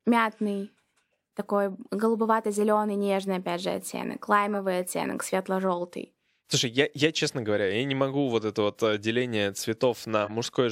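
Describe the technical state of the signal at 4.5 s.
At 4.53 to 4.57 s, a corrupt frame was decoded: a single damaged compressed frame, about 42 ms long, was played despite flipped bits, so misread gains and codes put energy at the wrong frequencies. It sounds like a short squeak or blip peaking around -25 dBFS. On a spectrogram it shows as a narrow vertical smear of misplaced energy, and in the waveform as a brief spurious burst.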